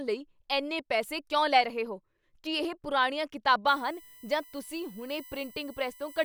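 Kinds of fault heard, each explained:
USB whine: the USB bus's 1 ms frames leak into the audio as a fixed-pitch whine on a 1 kHz series, strongest at 19 kHz and about 20 dB below the speech, from 3.67 s after "ਕੀ ਇਹ ਪੁਰਾਣੀਆਂ" to the end; mains hum would sit at 50 or 60 Hz instead.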